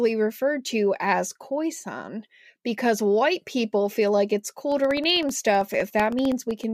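Speech with periodic USB or driver dropouts from 4.72 to 6.64 s: every 64 ms a sliver of roughly half a millisecond drops to silence, giving a regular ticking under the signal. The waveform shows evenly spaced silent gaps; a spectrogram shows matching thin vertical broadband lines.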